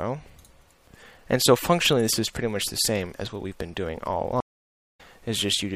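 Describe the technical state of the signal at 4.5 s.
At 4.5 s the audio is inside a stream reconnect (4.40–5.01 s): about 0.53 s of silence while the connection restarts. Unlike a plain dropout, the sound resumes with a fresh decoder roughly 0.2 s later in the material.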